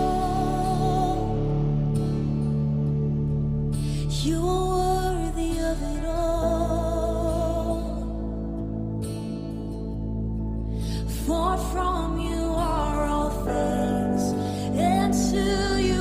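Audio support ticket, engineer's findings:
Adaptive stream at a lower bitrate, 7.56 s to end: sudden rise in codec artefacts, no gap. Fits a player switching from roughly 64 to 24 kbit/s Opus.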